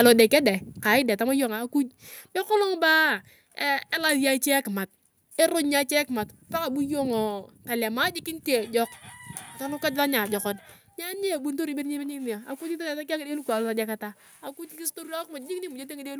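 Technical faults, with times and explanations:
0.05 to 0.21 s, microphone overload: The input level was likely set too high, driving peaks about 3 dB past the converter's ceiling. A small fraction of samples had their tops flattened, giving the loudest speech at the very start a harsh, crackly edge.
1.02 s, microphone volume stepped down: The input gain was cut in a single step of about 4 dB, likely by the call software reacting to that overload. Speech and background both drop suddenly in level just before "deng tama".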